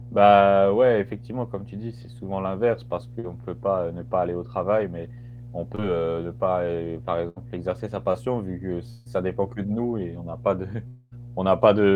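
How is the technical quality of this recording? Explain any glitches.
The recording is noticeably degraded, with steady hum and several network glitches.

Mains hum runs throughout: a steady 60 Hz tone, fairly strong at about 15 dB below the speech, from power-line coupling. Unlike the dropouts, it never stops.

Short concealed packet loss occurs at 3.19 s, at 5.75 s (between "travail mais on peut" and "ne pas heu par"), and at 8.12 s. Roughly 20 to 40 ms went missing each time, and the decoder extended the preceding sound. The result is a brief smear rather than an audible gap.

A burst of packet loss at 7.29–7.38 s, between "ne pas heu par" and "exercer sa", lost about 80 ms. The extended sound fades before speech resumes further on.

Long network dropouts are the likely cause at 8.90–9.07 s, between "vu que" and "dépend que de nous", and at 10.87–11.13 s. About 160 ms and 240 ms were lost, respectively. 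These gaps are longer than the burst, with a fading fill bridging each one.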